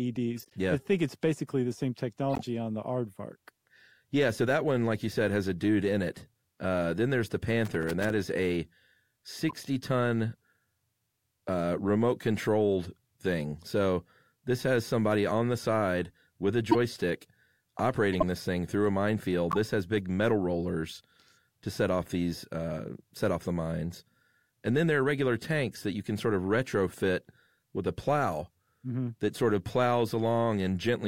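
Corrupt frames decoded at 0.37 to 0.53 s and 2.33 to 2.41 s: damaged compressed frames were played rather than concealed, so misread codes and gains put energy at the wrong frequencies for roughly the length of each bad frame. The first, spanning several frames and peaking near about -35 dBFS, is a faint chirp. The second is a briefer, louder blip near about -20 dBFS.

Loose connector crackle from 7.65 to 8.10 s, between "then there's the" and "is a": a poor contact is making and breaking, chopping the speech into an irregular burst of scratchy crackle.

Further corrupt frames decoded follow at 9.49 to 9.56 s, 16.71 to 16.75 s, 18.13 to 18.24 s (just before "this thing through a") and 19.51 to 19.57 s (between "thing through a minefield" and "has big metal rollers"). Each is a short squeak or noise blip covering only a few frames. The 16.71 and 18.13 s events are the loudest, near about -10 dBFS.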